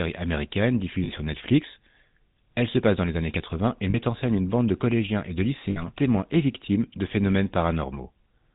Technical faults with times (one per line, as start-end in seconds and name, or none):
0.00-8.54 GSM full-rate codec
1.04-1.10 lost GSM frames
3.90-3.96 lost GSM frames
5.70-5.82 lost GSM frames